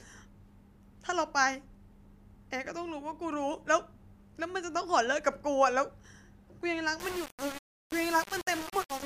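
From 6.99 s to the end at 9.06 s, the speech turns harsh and grainy, a sign of low bit depth without dither. The likely cause is requantising to about 5 bits by plain rounding, so the error tracks the signal and sits only about 10 dB below it. Quiet stretches sputter or drop out between steps. A waveform shows visible staircase levels, and a spectrogram shows a broadband haze that rises and falls with the speech.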